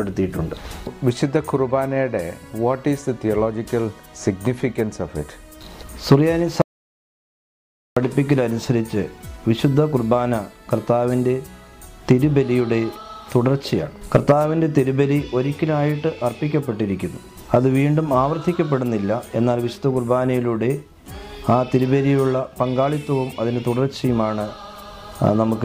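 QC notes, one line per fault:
6.62–7.97 s, audio dropout to silence: the sound cuts off abruptly and returns mid-flow after about 1.35 s of silence with no room tone, likely because the input signal was lost while recording continued writing silence, so that stretch of audio is gone.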